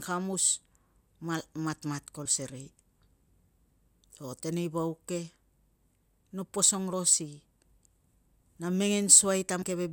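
At 2.25, 3.69, 6.93 and 9.62 s the speech jumps forward as compressed frames are skipped: whole frames, each about 26.1 ms long, were lost or rejected by the decoder and never played. The gaps amount to roughly 100 ms, 150 ms, 70 ms and 150 ms of missing audio. Adjacent frames overlap, so each join comes through as a short smeared blip rather than a hard click.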